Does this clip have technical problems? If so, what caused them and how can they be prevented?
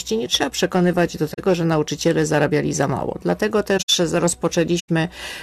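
Yes. Corrupt frame concealment occurs at 1.33–1.39 s, 3.77–3.90 s and 4.79–4.89 s, where the decoder smoothed over damaged AAC frames. Error-protected transport or retransmission would prevent this.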